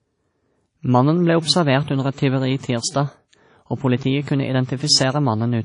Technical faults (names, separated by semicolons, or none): WMA compression; block of digital silence